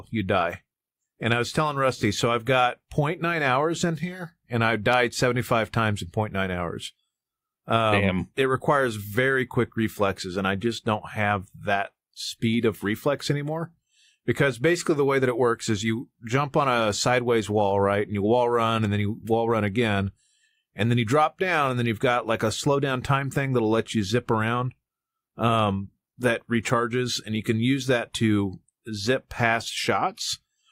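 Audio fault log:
1.97–2.03 s, AAC frame loss with concealment: between "I was telling" and "so I've got", about 43 ms of speech drops out, which matches a single AAC frame. The decoder fills the gap by repeating the last good spectrum with scrambled phase, so the moment sounds briefly smeared and noisy. On a spectrogram the harmonic striations blur into a diffuse, flat-topped slab; the waveform loses its periodic shape there while keeping roughly the same envelope.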